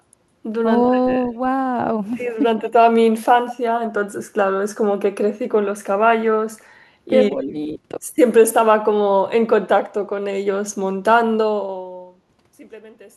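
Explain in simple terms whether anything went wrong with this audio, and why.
Two things went wrong, each a few times.

Echo leak: at 0.84 s, from 1.14 to 1.31 s, and from 2.63 to 2.7 s, a faint copy of the speech comes back about 0.15 seconds late. This is likely from a loudspeaker on the far end whose echo canceller let some of its own playback slip back into the microphone. Unlike ordinary room echo, which smears the sound evenly, this arrives as a separate, delayed repeat in short scraps.

Speech suppressed in double talk: at 2.6 s and from 7.31 to 7.78 s, the talker briefly gets quieter while the other side is also speaking. The first dip is short but deep, and the second is longer but milder. The echo canceller likely couldn't tell the talker apart from its own echo, so it turned both down. Unlike gentle, fader-like level changes, these dips are sudden and patchy.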